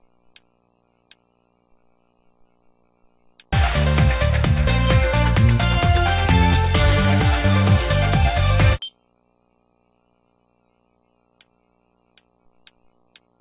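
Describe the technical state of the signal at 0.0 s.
At 0.0 s the signal is intact, with no audible fault at that moment.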